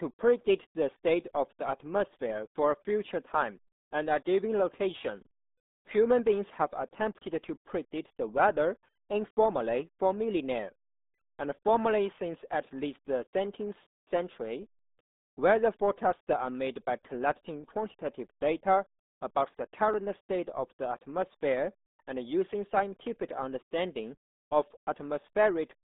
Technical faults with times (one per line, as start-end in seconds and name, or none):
0.00-25.83 RealAudio 14.4 codec